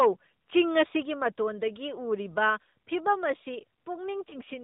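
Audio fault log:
throughout, AMR narrowband mobile codec: speech sounds muffled, buzzy and plainly synthetic with nothing above 4 kHz. Pulse-driven vocal-tract coding at 8 kHz causes this, and the damage fits roughly a 10.2 kbps mode.
1.02 s, microphone volume stepped down: voice and background drop suddenly by about 4 dB in one step, likely because call software lowered the microphone input volume.
4.30 to 4.39 s, lost AMR speech frames: a brief dip or warble in the speech. The decoder reused earlier pitch and vocal-tract settings at falling gain, which points to one lost 20 ms frame.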